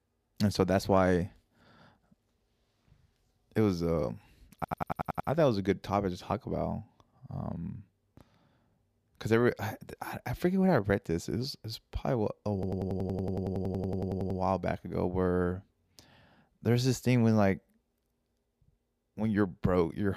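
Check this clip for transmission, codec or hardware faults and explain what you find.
There's a hardware fault here: a system hang loop, heard twice, from 4.64 to 5.29 s and from 12.63 to 14.40 s. Something froze while the audio device kept replaying the same ring buffer, so a roughly 93 ms slice of speech repeats exactly, which fits a 4096-sample buffer. At 10.8 repeats per second it comes across as a machine-gun stutter, about seven cycles the first time and about 19 the second.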